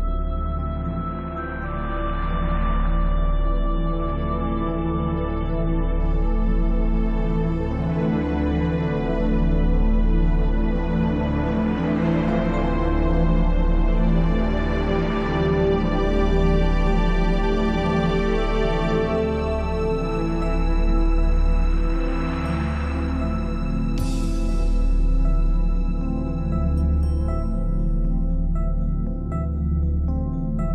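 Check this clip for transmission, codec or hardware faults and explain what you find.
There is one fault: an adaptive stream starting at a low bitrate. From 0.0 to 6.0 s the player runs on a reduced-quality version, consistent with roughly 32 kbit/s AAC, before jumping to about 96 kbit/s. Until the switch, nothing above 7 kHz survives, so the audio sounds dull and smeared. A spectrogram shows a hard ceiling at 7 kHz that suddenly opens at 6.0 s, while the waveform continues unbroken.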